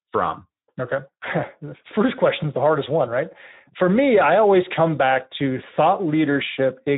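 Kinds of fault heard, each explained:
Speex codec: low-bitrate CELP coding, consistent with roughly 11 kbps, leaves the speech plainly hoarse and noisy throughout, with nothing above 3.8 kHz.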